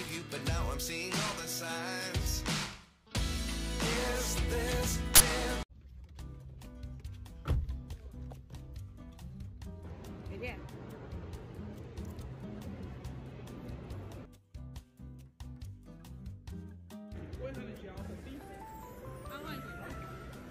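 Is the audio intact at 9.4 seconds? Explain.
Yes, at 9.4 seconds the audio is intact, with no dropout, click, distortion or other fault at that point.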